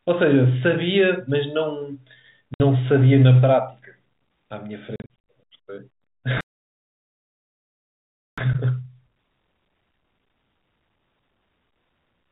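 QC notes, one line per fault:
2.54 s and 4.96–5.17 s, packet loss filled with silence: a clean 60 ms hole at 2.54 s, then 180 ms of gaps scattered over about 320 ms, none longer than 40 ms. The lengths step in 20 ms units, which fits 20 ms packets. Sound is missing, not paused.
6.41–8.38 s, playback stall: the sound stops mid-flow for 1.97 s of silence, most likely because the player ran out of data or its thread was blocked. Unlike the packet holes, this is one long, unbroken gap, and the speech then resumes.
8.38–11.38 s, time-compressed catch-up: the speech runs 1.15 times faster for 3 s as the player trims its backlog by cutting out and cross-fading small pieces. Pitch stays normal, which separates it from simply playing the audio faster.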